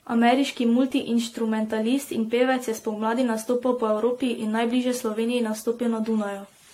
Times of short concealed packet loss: none

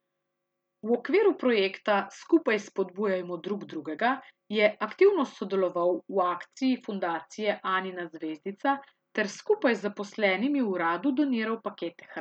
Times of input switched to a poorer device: none

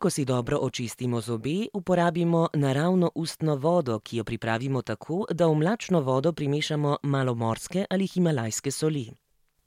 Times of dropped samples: none

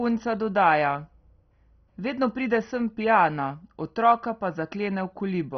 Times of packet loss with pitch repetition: none

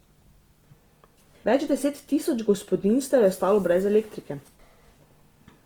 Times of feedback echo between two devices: none

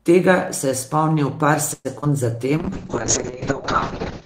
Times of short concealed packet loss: 2.01-2.07

